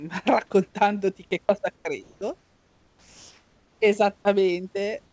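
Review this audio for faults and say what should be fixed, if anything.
Comfort noise replaces the background at 1.76–1.85 s and 2.03–2.21 s, both after "raccontandoti che cosa", then at 2.39–3.80 s and from 5.06 s to the end. In each gap the room hiss turns flat and featureless. Its level stays within about 3 dB of the real background. The likely cause is discontinuous transmission, which halts sending when no speech is detected. Disabling DTX on the sender would prevent it.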